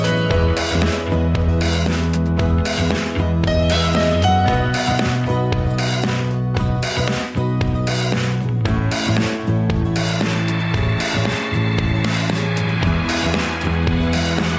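No technical faults are audible.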